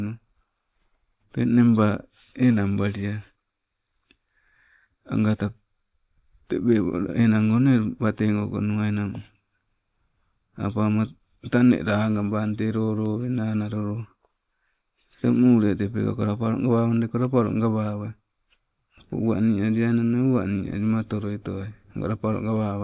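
Nothing in the recording stood out as a technical problem on listening.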